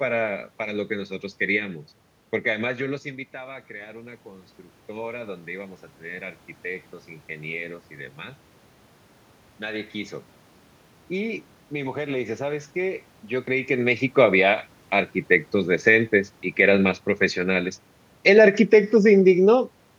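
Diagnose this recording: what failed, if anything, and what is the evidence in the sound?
In the call processing stage, automatic gain rising followed a drop of about 16 dB at the microphone when the talker moved away near 2.5 s. From 3.02 to 7.57 s the gain climbs by about 8 dB, so speech and room noise swell together slowly.

Later, an automatic gain falling event occurs in the same call processing stage. The control judged the input too loud, or its background noise too strong, and lowered its gain by about 3 dB between 18.17 and 19.69 s. The speech gradually sinks, with the room noise dropping alongside it.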